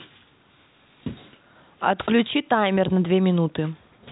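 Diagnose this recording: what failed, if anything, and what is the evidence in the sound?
Nothing failed; the recording shows no fault.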